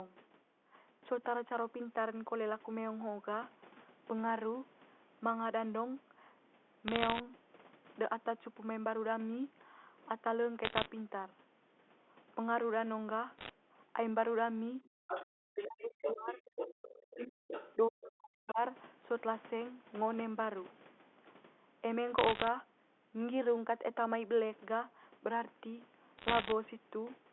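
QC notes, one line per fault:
6.88–7.20 s, 10.64–10.86 s, 13.38–13.49 s, 22.18–22.48 s and 26.18–26.52 s: bit errors on a digital phone line. Each burst is a short patch of sharp ticks and crackle laid over speech that otherwise keeps its shape. On a G.711 mu-law line every flipped bit corrupts a single sample, and a hit on the sign or a high-order bit throws that sample far off, giving a click. The density points to an error rate of between about 0.7 and 1.5 percent in the bursts.
14.87–18.59 s: speech suppressed in double talk. The talker's level repeatedly dips, thins out or drops away in pieces, falling by as much as about 40 dB and adding up to roughly two seconds of lost or weakened speech. This is likely the echo canceller clamping down while the far end talks over the near end. It cannot separate the local voice from loudspeaker echo, so it attenuates both.
15.07–17.75 s and 18.47–18.52 s: other side's voice leaking through. 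A second voice sits under the talker, at about 5 dB below the main speech during the longer stretch and as a brief scrap at about 20 dB down near 18.5 s. It is squeezed into the same narrow 200 Hz to 3.5 kHz line band. The likely cause is the far end's loudspeaker feeding the microphone, with the echo canceller removing only part of it.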